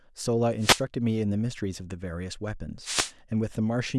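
The analogue FM radio link fades as reflections cancel, so receiver noise surges: two wireless microphone noise hits, 0.59–0.82 s and 2.82–3.12 s, burst as static swishes over the speech.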